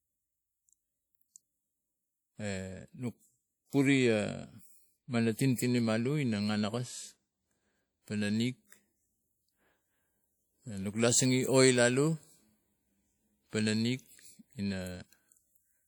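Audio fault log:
throughout, WMA compression: A transform codec using long blocks is spreading its quantisation noise over tens of milliseconds. The damage is plainly audible and fits a low bitrate near 48 kbps, likely WMA. The speech rings and sounds washy, with hiss that swells and fades with the signal.
5.55–5.58 s, pre-echo: A sharp attack landed late in a codec block, so noise sized for the loud onset was spread evenly back into the quiet moment before it. A brief hiss of about 37 ms leads into the attack, which sounds softened and smeared.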